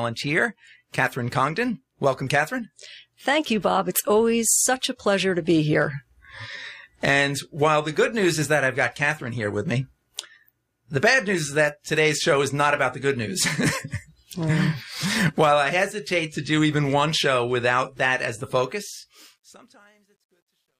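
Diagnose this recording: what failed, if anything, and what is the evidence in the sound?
Truncation distortion on a fade, at the sample-format conversion or gain stage. From 18.56 s to 20.80 s the fade-out turns grainy, and from 19.45 s it is at its worst. The fade stage rounded samples without dither, which fits roughly 11-bit resolution, so low levels collapsed into coarse square steps.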